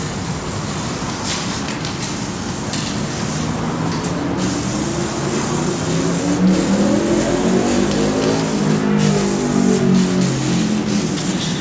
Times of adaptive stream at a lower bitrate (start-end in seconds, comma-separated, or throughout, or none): none